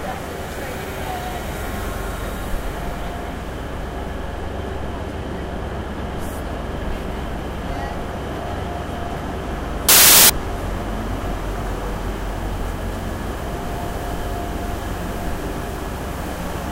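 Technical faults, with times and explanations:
9.89–10.30 s: samples built from the wrong bytes. For about 0.41 s each sample's bytes are assembled incorrectly, offset, swapped or misaligned, so the rapidly varying low-order bits land in the high-order position. The sound becomes loud, harsh broadband noise.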